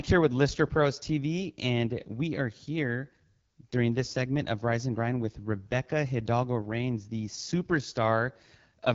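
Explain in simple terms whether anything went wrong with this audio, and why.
The speech passed through the AMR wideband (HD Voice) codec at one of its lowest settings, so throughout it sounds plainly rough and raspy, with nothing above 7.5 kHz.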